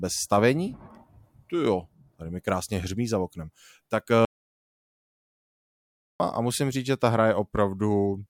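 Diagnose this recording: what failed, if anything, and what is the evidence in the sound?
What failed here is an audio dropout to silence, and it sits at the input end of the chain. After "hřmí za oknem tak", the speech cuts off mid-flow at 4.25 s and comes back at 6.20 s with "a musím říct že". That's roughly two seconds of dead silence, not even room tone, so whatever was said in between is gone. The likely cause is a briefly lost input, like a loose connection or a dropped link, while the recorder kept writing silence.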